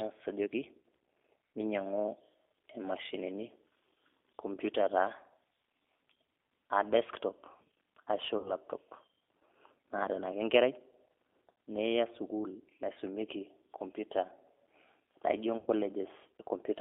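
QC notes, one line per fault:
throughout, G.729 codec: speech is plainly rough and synthetic, capped near 300 Hz to 3.5 kHz, as an 8 kbit/s decoder rebuilds it from filter, pitch and pulses.
8.38–8.53 s and 15.58–15.70 s, VoIP packet loss concealed by the speech codec: speech smears into a fading buzz or coloured noise, then stays weak, as the decoder extrapolates across 60 ms and 90 ms gaps.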